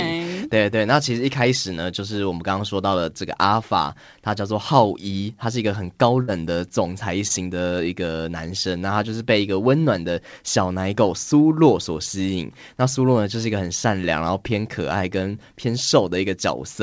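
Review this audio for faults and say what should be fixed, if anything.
A burst of packet loss at 6.22 to 6.30 s dropped about 60 ms of consecutive audio; the receiver extended and faded the last sound, then jumped ahead past the missing part.

A short concealed packet loss at 7.28 to 7.32 s left roughly 20 ms missing; the decoder synthesized a brief continuation and blended back, producing a brief smear.

Both should be fixed at the network level, with a larger jitter buffer and forward error correction or redundancy to absorb late and lost packets.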